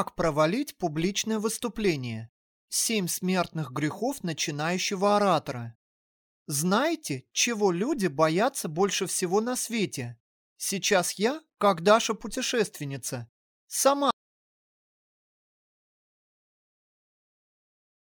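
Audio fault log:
14.11 s to end, audio dropout to silence: sound cuts off mid-flow into silence with no room tone, likely a lost input while recording continued.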